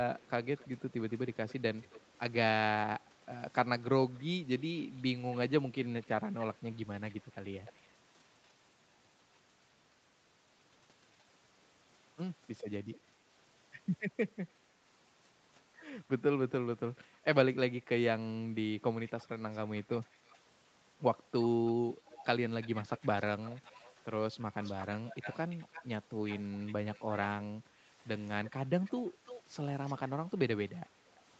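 A faint delayed copy of the speech trails the direct sound at 0.15–2.2 s, 4.13–5.37 s, 6.02–6.07 s, 6.74–8.53 s, 11.2–11.24 s, 19.08–20.39 s, 21.42–27.23 s and 28.45–30.3 s. This is an echo leak, likely from a far-end loudspeaker whose echo canceller let residue through. The lag grows from 276 ms to 340 ms. The echo is very quiet early on and gets louder toward the end. On a spectrogram, ghost harmonics repeat each syllable about a third of a second later, capped at 8 kHz like the rest of the call.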